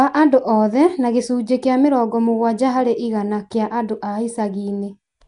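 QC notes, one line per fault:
Throughout, likely Nellymoser compression: the speech is rough and smeared, with a hissy, underwater halo and nothing above 10.6 kHz. Unlike MP3 swirl, the grit is steady noise filling weak bands left without bits by fixed, coarse quantisation.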